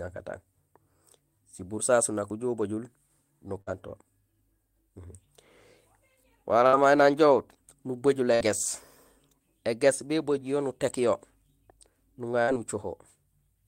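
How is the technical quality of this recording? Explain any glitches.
The speech is marred by four short dropouts, each a burst of packet loss: 3.61–3.70 s, 6.67–6.76 s (just before "may nang"), 8.35–8.43 s and 12.42–12.51 s. In each, lost packets were concealed by stretching the last sound for about 50–60 ms into a fading buzz or hiss, then 60 ms of speech is skipped. On a spectrogram, each shows as smeared, decaying harmonics followed by an abrupt jump.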